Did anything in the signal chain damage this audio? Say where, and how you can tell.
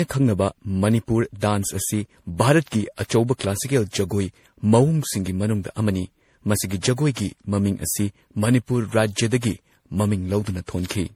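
Yes, at the codec stage: generation loss, likely from roughly seven MP3 re-encodes, leaves the speech swirly, hollow and smeared throughout, with blurred attacks and nothing above 17.8 kHz.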